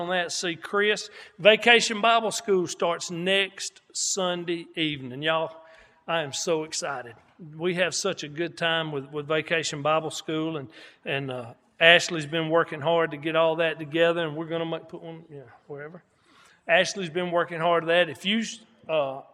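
No audible technical faults.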